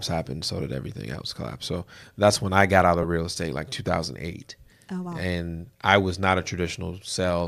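Speech, with one dropout from lost LE Audio frames between 3.03 and 3.05 s. The gap is about 10 ms, which fits a single lost LC3 frame. The decoder fills it by repeating the previous spectrum with scrambled phase, so the sound briefly turns to a grainy, noisy smear. The light LC3 coding audible throughout is likely the Bluetooth link itself.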